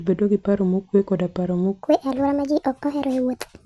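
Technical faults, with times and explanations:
1.83–3.65 s, wrong sample rate: after "paro mokuwe koda paro" the audio plays 1.5 times too fast, raising speech about 7 semitones, consistent with 16 kHz samples played at 24 kHz.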